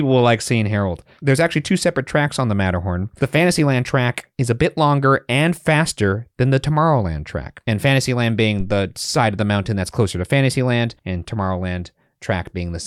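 At 8.60 to 8.88 s, just before "side of the mountain", there is a phantom power thump. A supply step on the live input passes through the coupling capacitors and is heard as a deep thud peaking about -16 dBFS and dying away in 63 ms. Unlike a plosive pop, it comes from no consonant.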